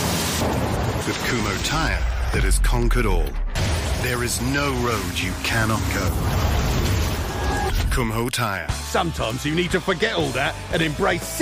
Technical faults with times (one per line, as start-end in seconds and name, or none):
0.12-11.28 word clock ticks